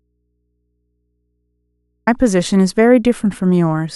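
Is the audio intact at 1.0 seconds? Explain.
No. An audio dropout to a faint residue runs from the start of the clip to 2.07 s. The speech signal was likely lost upstream while the path stayed live, so the gap holds only mains hum, about 55 dB below the speech, until it abruptly returns.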